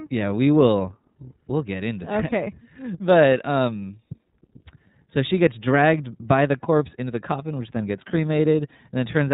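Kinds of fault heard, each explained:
iLBC codec: the speech has been squeezed through the narrowband iLBC VoIP codec, which codes each frame's excitation on its own with no help from the previous frame. The result is cut off above 4 kHz, with a plainly rough, synthetic texture that fits 30 ms frames at around 13.33 kbps.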